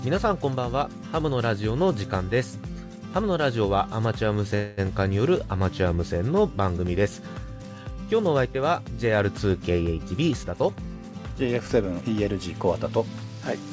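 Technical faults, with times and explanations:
4.55–4.80 s, call audio freeze: packets likely stalled, so the last sound is stretched as a fading buzz for about 223 ms, delaying everything after without loss.
10.0–12.0 s, jitter buffer speed-up: the buffer trims short pitch-period pieces repeatedly, about a fifth of a second in all, so audio runs 9% fast at unchanged pitch.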